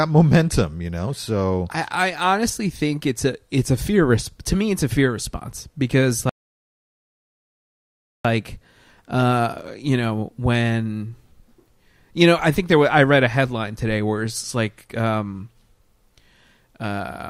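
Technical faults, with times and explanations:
6.29 to 8.25 s, rebuffering stall: the speech drops to silence for 1.95 s, then picks up at the same point. The player's downloaded audio ran dry, so playback paused until more data arrived.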